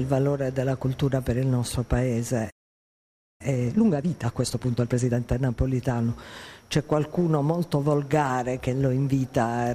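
At 2.50 s the sound cuts out abruptly in mid-flow. Silence holds for about 0.9 s, until 3.41 s. This is a playback stall. The output simply had nothing to play. The likely cause is that the player ran dry of buffered data, or its output thread was held up. The audio just stops and then resumes.

From 3.41 s to 5.19 s the audio runs fast. This is time-compressed catch-up. The player is clearing the backlog left by the stall. It drops small slices and cross-fades the joins, at a rate of 1.5 times normal. Pitch stays where it was, so nothing sounds higher. The pace feels hurried, though. Normal speed returns at 5.19 s.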